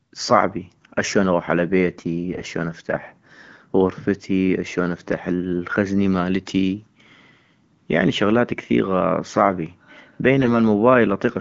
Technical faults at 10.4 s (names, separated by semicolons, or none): AMR bit errors